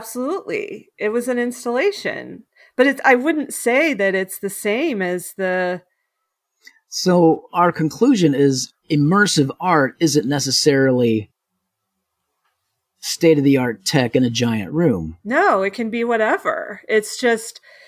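No technical faults occur at any point in the recording, so there is nothing to describe in time order.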